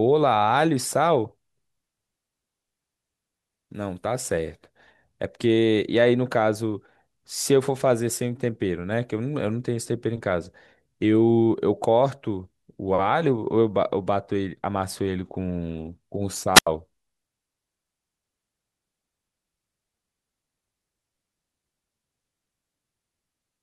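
At 16.54 s the speech is cut by a wireless microphone squelch dropout lasting until 16.67 s. The analogue FM radio link fades, the receiver's squelch judges the signal too weak and mutes its output, leaving a hole of about 82 ms. It sounds like a brief rise of hiss, near silence, then the speech returning. On a spectrogram, broadband noise brightens just before a blank vertical strip. The waveform collapses to a flat line, then resumes.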